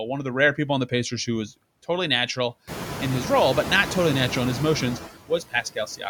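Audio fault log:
Throughout: noise suppressor artifacts. The suppressor pulls the steady background down by about 15 dB frame by frame, so the noise dips between phrases and swells back under the speech. The room noise jumps about 19 dB around 2.5 s, sitting roughly 11 dB below the speech.
5.29 to 6.06 s: speech cut by the noise suppressor. Near the end, the suppressor mistakes bits of the speech for noise and ducks them along with the background, by about 17 dB at worst. Around a third of a second in total sounds swallowed or faint.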